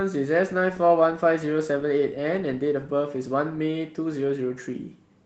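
No faults found in the speech; its Opus voice compression keeps the full band in hybrid coding, which fits a rate around 20 kbps, and leaves only light coding traces.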